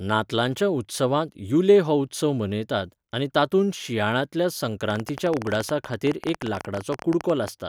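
A train of clicks runs from 4.90 s to 7.49 s in this speech clip, about forty near-identical pulses arriving at an uneven pace that averages 14.8 per second. They peak around 10 dB above the speech, so they stand out as a harsh ticking over the voice and in the gaps between phrases. The cause is likely interference from nearby equipment or a faulty connection or power supply repeatedly injecting short spikes into the signal.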